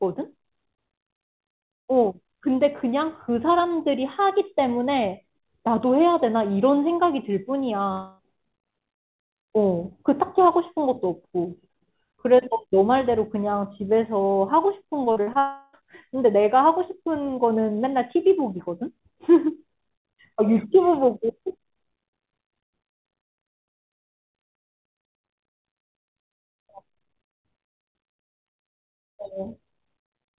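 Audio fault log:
7.92–8.21 s and 15.39–15.75 s, long network dropout. The speech stops, and a fading buzz stretches the last sound for about 0.27 s and then 0.34 s. It never reaches silence. Speech then resumes with about 0.26 s and 0.34 s gone. Likely a stall in the call's network path.
15.05–15.37 s, repeated packet loss (robotic sound). Five short holes break the speech, the longest 41 ms. Each is patched by extending the last sound, which covers 38% of this span. The result is choppy and robotic, with about 140 ms lost. It runs straight into the second dropout.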